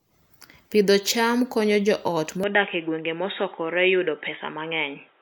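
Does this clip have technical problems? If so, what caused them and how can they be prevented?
Yes. From 2.44 s to the end at 5.22 s, the speech turns dull and boxy with nothing above 3.8 kHz, a faint new background noise well below the voice, and no gap or level jump. This is likely an input switched to a poorer device mid-recording. Locking the recording software to one fixed microphone and disabling automatic device switching would prevent it.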